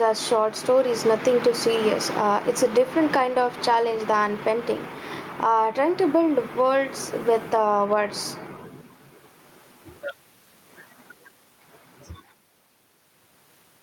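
Throughout, gain pumping is heard: input gain likely set far too high for the microphone forces a fast limiter to clamp down by roughly 10 dB on every loud syllable. The room noise sits about 45 dB below the speech, and the speech is squashed.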